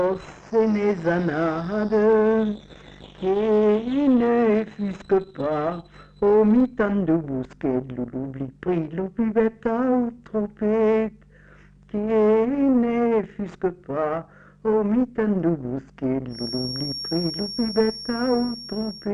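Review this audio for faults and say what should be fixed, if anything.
A feedback whistle enters at 16.27 s and runs to 19.14 s: a thin, steady 5.5 kHz tone sitting roughly 15 dB below the signal, swelling and fading slowly in level. This is likely a loudspeaker-to-microphone loop held just at the feedback threshold. Prevent it by lowering monitor gain, repositioning the microphone, or notching 5.5 kHz.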